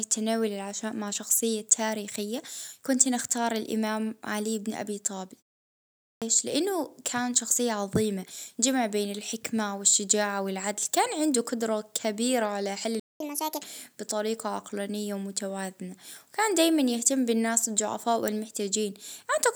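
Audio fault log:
6.02–6.22 s, clipped start after a pause: after 0.68 s of silence the output wakes late, losing about 0.2 s of onset; the waveform jumps straight from silence into the speech.
13.00–13.20 s, playback stall: sound halts for 0.21 s, likely a buffer underrun, showing as a flat waveform gap and a blank vertical band across the spectrogram.
13.20–13.62 s, catch-up at higher speed: the backlog plays at 1.5× speed, pitch rising roughly seven semitones; harmonics shift upward and the waveform compresses before returning to normal.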